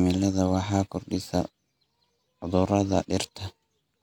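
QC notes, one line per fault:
Nothing stood out on listening to this speech recording.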